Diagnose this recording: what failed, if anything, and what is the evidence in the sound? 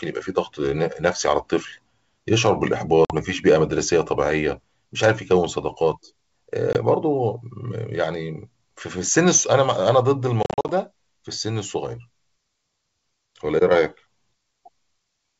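Packet loss on an ADPCM call, at the network stage. Hard-edged silent gaps cut into the speech at 3.05 to 3.14 s, about 50 ms lost, and at 6.73 to 6.77 s, about 20 ms. At 10.43 to 10.70 s, 170 ms drops out in pieces over 260 ms, the longest hole 40 ms. After each gap the decoder's predictor and step size no longer match the sender's. Speech returns slightly distorted, then settles. The clear 7 kHz band fits G.722 at 64 kbit/s.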